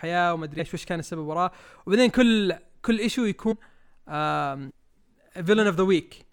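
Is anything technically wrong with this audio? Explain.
Yes. Compressed frames are skipped at 0.58 s, 3.51–3.53 s and 4.69–4.71 s. Compressed frames, which fit a 23.2 ms frame length, go missing. The speech jumps ahead by roughly 150, 300 and 700 ms.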